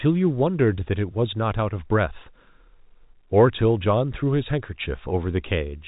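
No technical faults are present.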